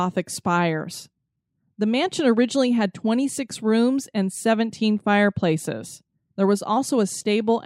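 Speech recording with no audible technical faults.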